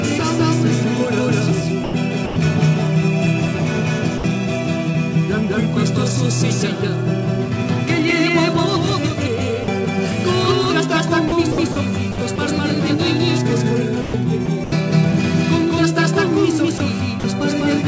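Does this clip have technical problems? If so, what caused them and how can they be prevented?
Yes. A doubled audio track runs throughout. A second full-band copy trails the original by about 200 ms, at roughly the same level. It has no decay or room colour. A second, slower capture path or an edit holding two out-of-step copies is the likely cause. To prevent it, make sure only one capture path feeds the mix, and check edits for leftover duplicate copies.

Sound chopped by the voice detector occurs at 1.84–2.36 s, 11.28–12.38 s, 14.02–14.72 s and 16.78–17.24 s. The sender's detector likely switched on and off several times in each stretch. Quiet portions were replaced by comfort noise, about 200, 220, 220 and 60 ms respectively. The sound turns choppy. To prevent it, lower the detector's threshold or lengthen its hangover time.

Sound dropped by the voice detector occurs at 4.18–4.24 s and 9.64–9.68 s. 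Here the detector likely took quiet sound for background and stopped sending. That lost 60 ms and 40 ms of sound. Comfort noise fills each gap until sending resumes. To prevent it, disable discontinuous transmission or make the detector less aggressive.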